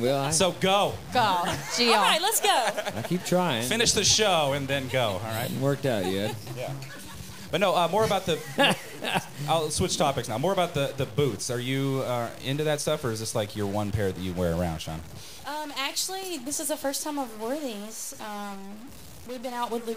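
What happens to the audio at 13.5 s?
Harsh, buzzy distortion sits on the sound at 13.5 s, as it does across the whole clip, and quiet stretches fill with a steady noise. The likely cause is a stuck bit: one data bit held fixed, knocking roughly half the sample values off by a step of around -40 dBFS.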